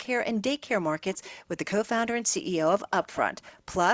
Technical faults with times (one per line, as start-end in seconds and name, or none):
1.14-1.31 echo leak
3.03-3.17 echo leak
3.43-3.52 echo leak